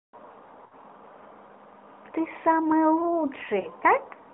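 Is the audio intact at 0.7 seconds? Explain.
No. From 0.66 to 0.74 s the speech stretches into a smeared, fading sound, then resumes weakly. These are lost AMR speech frames: the decoder repeated its last good pitch and vocal-tract settings at falling gain across a 60 ms gap, which fits three 20 ms frames.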